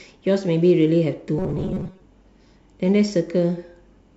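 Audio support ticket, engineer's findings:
Robotic sound from repeated short buffers, 1.38 to 2.01 s. Speech collapses into a stiff metallic buzz at 188 Hz that still loosely tracks the words. Likely a starved playback buffer: audio isn't arriving fast enough, so the same roughly 5 ms chunk gets looped to fill the gap. About half the audio in that stretch is repeats, with real material skipped, and the loop rate sets the fixed pitch.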